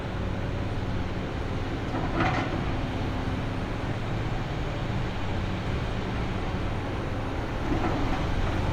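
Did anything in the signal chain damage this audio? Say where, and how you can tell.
No, nothing in the signal chain damaged this audio.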